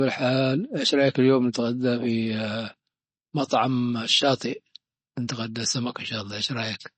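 Throughout, the speech shows plainly audible damage, most likely from MP3 compression. Nothing sounds above 8.3 kHz, and the watery swirl fits a starved bitrate near 32 kbps.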